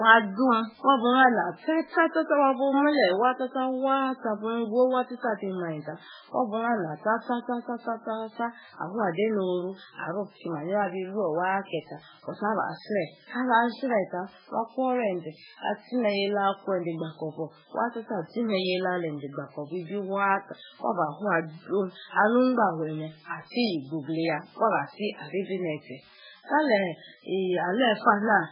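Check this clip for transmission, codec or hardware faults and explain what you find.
Yes, heavy MP3 compression damage is present. Throughout the speech, the sound is watery and swirly, likely from MP3 encoding at a bitrate near 8 kbps, with weak frequency lines dropping out frame by frame. A spectrogram would show a hard ceiling at 5.2 kHz and flickering gaps below it.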